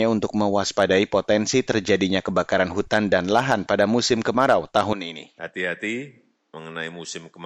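From 4.93 s, right after "lahan pada musim kemarau", the speech abruptly turns duller and boxier. It drops about 5 dB in level and carries a faint new background noise roughly 45 dB below the speech, continuing to the end. There is no gap at the change. This is most likely an input switched to a poorer device, with the recording moving mid-take onto a narrower-band microphone that has its own tone and noise.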